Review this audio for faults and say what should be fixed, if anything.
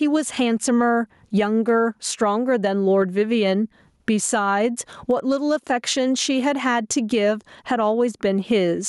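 Gain pumping runs throughout. The gain swings by around 15 dB, pulling down under loud sounds. Excessive input gain driving a fast limiter is the likely cause. Lower the microphone gain and ease the limiter to prevent it.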